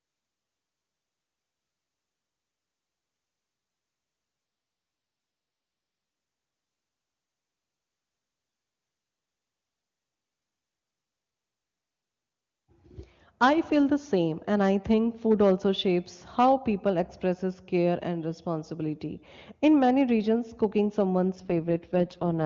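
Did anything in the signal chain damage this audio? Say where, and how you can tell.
Yes, at the network stage: an AMR rate drop from 4.45 to 6.15 s and from 21.35 s to the end. The speech turns rough and raspy, consistent with the AMR-WB codec being pushed from about 23.85 to its 6.6 kbit/s floor. Unlike a lost packet, there is no gap and no narrowing of the band.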